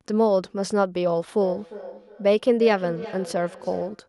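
A speech clip where, from 1.41 s to the end, each phrase returns roughly every 400 ms, thinner and ringing, peaking about 14 dB below the speech: feedback echo between two devices sharing a call in one room.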